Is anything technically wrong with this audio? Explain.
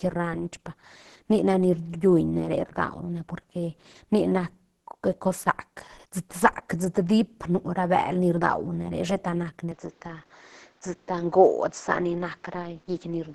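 Yes. Throughout this speech clip there is heavy grainy, hoarse roughness with nothing above 12.1 kHz, likely Opus compression in hybrid mode at around 12 kbps, noisy rather than swirly like MP3. From 9.72 s to the end, likely input switched to a poorer device: the band narrows to 7.6 kHz, with new faint background noise and no gap or level jump, unlike a filter.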